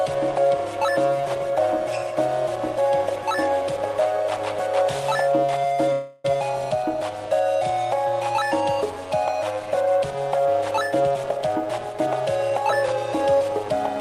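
From 5.92 to 6.25 s the audio stalls for about 0.32 s, filled with a fading continuation of the last sound, and then resumes exactly where it stopped. This is a call audio freeze, likely from delayed packets draining the jitter buffer. Nothing is lost, but playback now runs 0.32 s later. On a spectrogram the final frame smears into repeating, dimming bands before normal detail returns.

Jitter buffer speed-up follows twice, at 10.95 to 12.07 s (114% speed, shedding roughly 150 ms) and 12.50 to 13.72 s (106%, about 70 ms). Tiny pitch-period slices are cut repeatedly, so the sound hurries while pitch holds. A waveform shows compressed timing with unchanged pitch periods.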